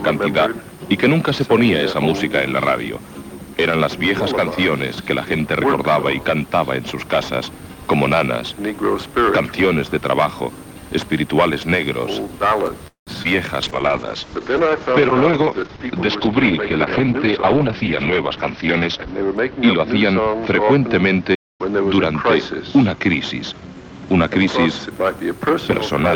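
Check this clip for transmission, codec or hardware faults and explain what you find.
Six faults of five kinds appear from about 12.9 s onward, all transmission or playback problems.

From 12.87 to 13.09 s there is a call audio freeze. The last sound carries on as a fading buzz and then goes silent for about 130 ms before the audio resumes where it stopped. This is likely packets held in transit draining the jitter buffer. It differs from a stall because the sound is stretched rather than cut, and about 193 ms of delay is added with nothing lost.

At 13.23 to 13.27 s a short concealed packet loss leaves a brief smear. About 20 ms never reached the decoder in time, so the receiver extrapolated the preceding sound and blended back. Unlike the freeze, this gap is too short to hear as a pause, and real audio is missing.

From 13.63 to 24.97 s a call bitrate drop takes the encoder from 32 to 8 kbps, with bandwidth falling from 20 kHz to 6 kHz. 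The sound turns muffled and watery, and it stays at its worst for about 5.6 s. The lasting dullness separates this from the brief, local glitches.

Two jitter buffer speed-ups, from 17.00 to 17.81 s at 107% and from 23.52 to 23.84 s at 114%, trim pitch periods to shed backlog, removing roughly 70 ms and 50 ms. The audio sounds hurried at unchanged pitch, which is how it differs from a resampling error.

From 21.34 to 21.61 s a playback stall cuts the output to silence for about 245 ms mid-flow, likely from the player running dry. Unlike the freeze, there is no fading tail. The sound simply stops.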